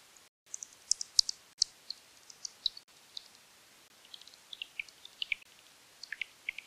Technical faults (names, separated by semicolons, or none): block of digital silence